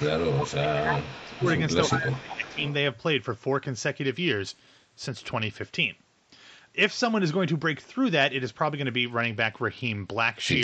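From 0.0 to 0.72 s, and again at 0.99–1.07, 1.24–1.59 and 2.15–2.74 s, a delayed copy of the speech trails the original by about 0.35 s. This is echo leak, likely from a far-end loudspeaker whose echo canceller let part of the pickup return. The copy sits roughly 10 dB down at first, then 15 to 25 dB down. On a spectrogram it appears as a weaker ghost of the harmonic pattern, shifted 0.35 s to the right.

Overlapping this, at 0.59–1.46 s and 1.88–2.61 s, the speech dips by as much as about 20 dB. This is speech suppressed in double talk, likely caused by the echo canceller confusing its own talker with the echo and attenuating both. In the waveform the envelope pinches abruptly.

At 4.04–5.60 s, and from 9.06 s to the end of the clip, the treble goes dull and a gritty, granular noise rises. This is a Bluetooth SBC bit pool drop. The sound fits a bit pool falling from around 31 to 10, roughly 77 kbps, which starves the upper sub-bands. 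The spectrogram shows a lowered, ragged ceiling with speckled quantisation noise. Throughout, nothing appears above 8 kHz, consistent with call microphone processing.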